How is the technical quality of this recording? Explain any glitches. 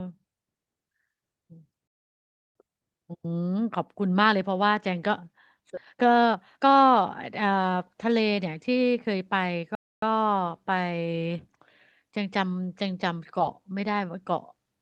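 The recording has clear delivery glitches: two silent stalls, one forward jump, and a stretch of hurried playback.

Playback stall, 1.88 to 2.55 s and 9.75 to 10.02 s. The sound halts for about 0.68 s, then 0.27 s. The player likely ran short of data.

Skip ahead at 5.77 s. Roughly a second of speech is dropped. The two sides butt together with no gap, so playback jumps forward.

Jitter buffer speed-up, 5.81 to 9.64 s. Speech runs at 115% speed with unchanged pitch. Tiny pitch-period slices, about half a second in total, were cut, so it sounds rushed.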